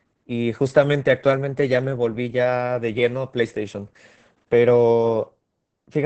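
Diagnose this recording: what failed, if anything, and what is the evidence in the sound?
The codec stage failed: the whole speech recording carries Opus voice compression in its SILK linear-prediction mode. From start to finish nothing reaches above about 8.5 kHz, so the voice sounds muffled, hoarse and faintly robotic, which fits a bitrate near 10 kbps. On a spectrogram the energy stops at a flat ceiling near 8.5 kHz, and harmonics below it look smeared and blotchy because the excitation is coded coarsely, frame by frame.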